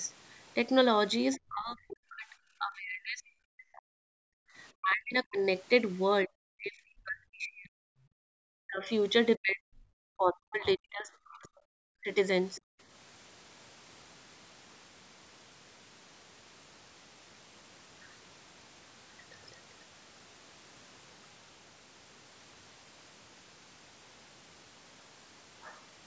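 A speech recording carried through a call's microphone processing, with nothing above about 8 kHz, shows three echo-canceller faults. Brief scraps of the other side's voice leaking through appear at 1.33 to 1.37 s and 12.55 to 12.61 s, some 30 to 35 dB below the talker. A second, faint voice is heard here, not a repeat of the talker's own words, which sets it apart from ordinary echo; it is likely residual loudspeaker sound the canceller failed to remove. Speech suppressed in double talk follows from 1.37 to 5.43 s, 6.24 to 7.8 s and 8.62 to 12.69 s. The talker's voice repeatedly sinks, by as much as roughly 40 dB, over about three seconds of the first and third stretches and one and a half seconds of the second. This is likely the canceller turning everything down while both sides spoke at once. Because the talker's own speech is what dips, it differs from a network dropout, which would take out whole chunks regardless of who was talking. 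Background gated by the echo canceller occurs from 8.08 to 8.34 s, where the room sound falls away by about 36 dB for roughly a third of a second and then comes back. The ambience, not the voice, is what vanishes, as the microphone is clamped while the loudspeaker plays, and it returns as soon as the canceller releases.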